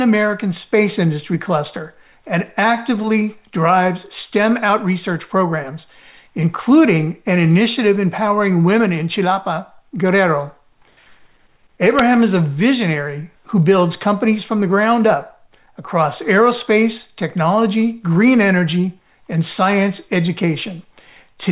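No dropouts, clipping, distortion, glitches or other technical faults can be heard anywhere in the audio.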